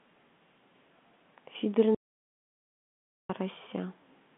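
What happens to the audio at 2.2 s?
An audio dropout to silence covers 2.2 s, running from 1.95 s to 3.29 s, so about 1.35 s of the speech is missing. The speech stops abruptly mid-flow and returns just as suddenly, and in between there is silence with no room tone or line hiss. The input signal was likely lost, perhaps through a broken link or a device briefly dropping out, while the recording kept writing silence.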